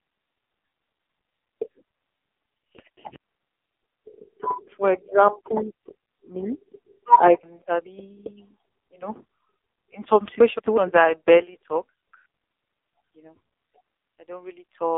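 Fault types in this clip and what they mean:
AMR narrowband mobile codec, throughout: a pulse-driven vocal-tract model rebuilds speech within 250 Hz to 3.6 kHz; heavy synthetic buzz points to a rate near 5.9 kbps.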